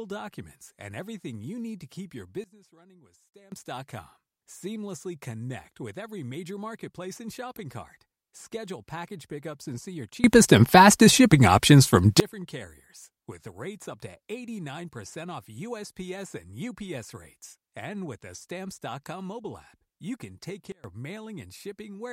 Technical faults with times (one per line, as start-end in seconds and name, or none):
2.44-3.52 sudden gain jump
7.56 electrical switching spike
10.24-12.20 sudden gain jump
20.72-20.84 sudden gain jump